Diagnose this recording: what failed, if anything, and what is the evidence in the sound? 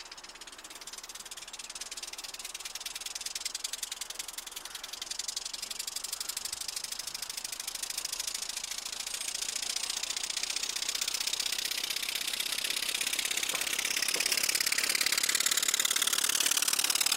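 Nothing failed: no stage in the chain, from wiring and conversion through buffering, processing, transport, storage and playback, leaves any audible trace anywhere in the recording.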